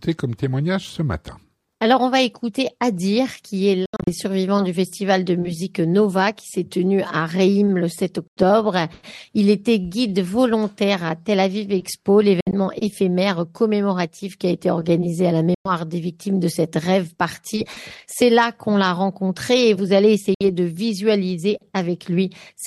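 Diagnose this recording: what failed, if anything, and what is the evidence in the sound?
The sound cuts out at 3.86, 8.28, 12.41, 15.54 and 20.34 s. Each gap lasts 60 to 150 ms, with abrupt or briefly faded edges, and two are split into shorter holes. It resumes further on, as if it kept playing. This is likely a Bluetooth dropout at the wireless playback link.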